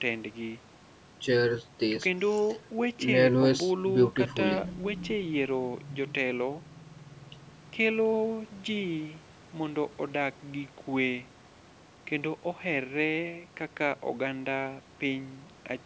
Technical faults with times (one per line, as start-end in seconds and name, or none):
none